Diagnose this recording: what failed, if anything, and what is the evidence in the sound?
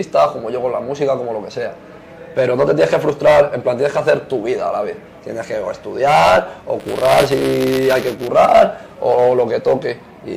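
Buffer tearing, from 6.80 to 8.28 s, at the driver or buffer stage: a steady robotic buzz at 200 Hz rides on the signal. Writer and hardware reader have slipped and cross each 5 ms period, so a small slice of every buffer replays audio about 20 ms old, spliced in with hard joins.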